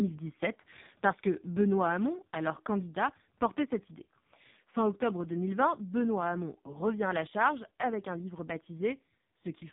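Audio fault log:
Throughout: AMR narrowband mobile codec. The speech is rebuilt from a coarse vocal-tract model, leaving it buzzy, synthetic and heavily damaged, which fits one of the lowest AMR-NB modes, near 5 kbps. A spectrogram shows a hard ceiling at 3.8 kHz, empty above.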